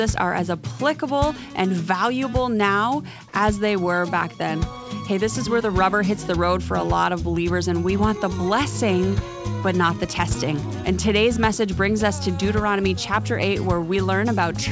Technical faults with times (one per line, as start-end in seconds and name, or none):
none